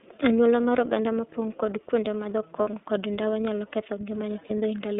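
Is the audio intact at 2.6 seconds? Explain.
No. Between 2.61 and 2.70 s, just after "mopong' kod kuonde madho", packets were dropped on an iLBC link. The gap fits about 60 ms of missing audio, or two 30 ms frames. With nothing to decode, the receiver concealed the hole by repeating the last pitch cycle it had, blended with noise. That loss of iLBC frames is heard as a brief held, slightly buzzy vowel in place of real speech. Because each iLBC frame decodes on its own, the speech is right again right away at "kod ndawa nyalo ketho".

That moment also sits inside the iLBC codec coding that covers the whole clip, running at 13.33 kb/s in 30 ms frames over a telephone band of about 150 Hz to 3.7 kHz. The codec rebuilds each frame's excitation from a compact description instead of sending the waveform. The speech at 2.6 s is therefore band-limited, with nothing above 3.7 kHz, and has a plainly audible rough, synthetic edge.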